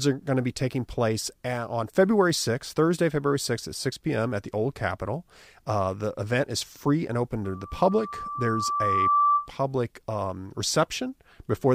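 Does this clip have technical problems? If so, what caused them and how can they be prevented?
Yes. Loudspeaker feedback squeal from 7.44 to 9.51 s, after "is free and open": a 1.2 kHz tone swells over roughly one and a half seconds to about 5 dB above the speech, as the microphone re-amplifies its own loudspeaker. Prevent it by lowering gain, moving the microphone away from loudspeakers, or notching 1.2 kHz.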